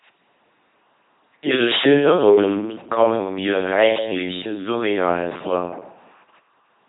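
It's a speech clip run through an LPC-10 vocoder from start to finish, and you can hear it in the buzzy, robotic quality of the whole thing. At about 2.4 kbit/s the codec keeps only a rough ten-pole filter of the vocal tract, excited by either a pulse train or noise, so each moment is forced to be fully voiced or fully unvoiced. The damage is heavy, with buzz and hiss landing in the wrong places, and nothing comes through above 3.8 kHz.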